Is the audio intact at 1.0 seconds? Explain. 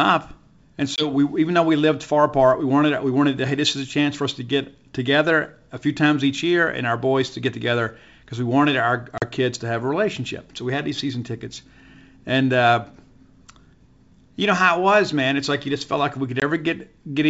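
No, there's packet loss on an ADPCM call from 0.96 to 1.10 s: a roughly one-packet, 20 ms silent hole. Then the decoder's predictor and step size are out of sync, so "even though we lived" comes back with brief distortion.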